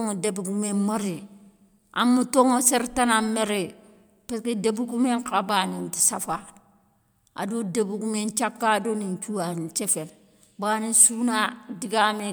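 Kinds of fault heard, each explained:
No technical faults can be heard anywhere in the speech recording.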